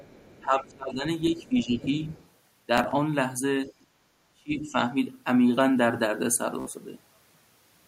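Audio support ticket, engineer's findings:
Other side's voice leaking through: faint second voice at 0.00–0.44, 1.35–1.48, 1.82–2.28, 3.67–3.85 s, about 25–30 dB down; likely residual echo past the canceller, visible as weak harmonic traces under the main voice.

Speech suppressed in double talk: level dips at 0.41–1.05, 1.30–1.82, 4.33–4.77 s, deepest around 25, 10, 30 dB; likely canceller ducks near talker along with echo, so the waveform envelope caves in and the spectrogram thins.

Bluetooth stutter: 2.78–2.95 s, about 46 ms lost in short repeated slices of about 15 ms; 6.60–6.70 s, about 61 ms lost. The receiver replays its last buffer, leaving repeated vertical-stripe blocks on the spectrogram.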